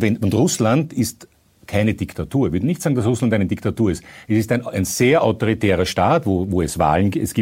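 A speech recording with a single loud pop from 6.81 to 6.83 s, a short burst that peaks several decibels above the speech, which carries on unbroken beneath it. The likely cause is a sudden voltage pulse, such as a connector being disturbed, a switch, static discharge or a driver glitch, shaped by the downstream circuitry.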